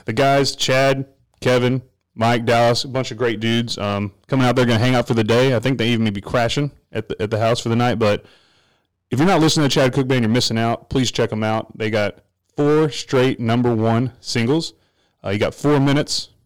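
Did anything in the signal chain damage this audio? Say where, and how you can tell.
Yes. Hard clipping runs through the whole speech clip, at a converter or sample-format stage driven about 15 dB past full scale. Around a tenth of samples hit the ceiling and are cut flat, producing harsh fuzz on every loud syllable rather than the rounded warmth of analogue saturation.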